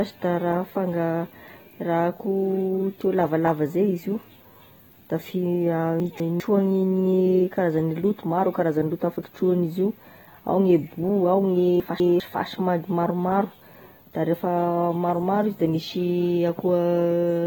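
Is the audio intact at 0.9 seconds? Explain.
No. At 0.9 seconds the speech sounds dull and smeared, with a warbling, fizzy texture on sustained sounds and sibilants. This damage is plainly audible and runs through the whole clip. It is likely AAC compression (AAC-LC) at a low bitrate, around 24 kbps judging by the sound. The encoder quantises each frame's frequency lines so coarsely that detail goes missing and gaps appear in the spectrum. Nothing is present above about 19.3 kHz.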